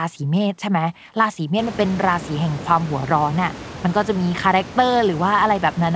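No faults found; the room's background noise steps up by about 25 dB at roughly 1.5 s and then sits about 16 dB under the speech, and the call path's wideband codec leaves nothing above 8 kHz.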